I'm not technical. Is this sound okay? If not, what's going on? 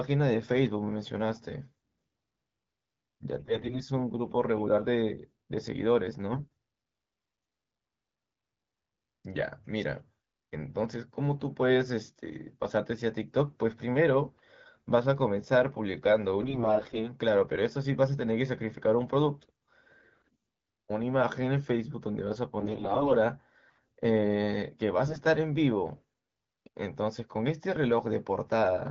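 No. In six short patches the voice turns hoarse and gargly: 3.39 to 3.81 s, 6.32 to 6.48 s, 16.41 to 17.12 s, 20.24 to 20.36 s, 22.60 to 23.12 s and 25.07 to 25.21 s. These are AMR bit errors. A weak phone link scrambled some of the transmitted data, so the phone rebuilt the voice inaccurately. Unlike a dropout, the sound never goes silent and keeps its pitch and loudness. It just turns scratchy.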